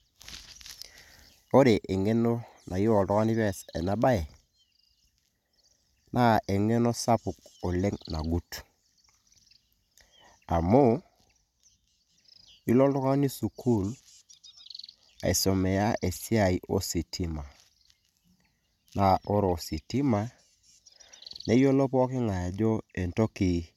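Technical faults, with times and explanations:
No technical faults can be heard in this speech recording.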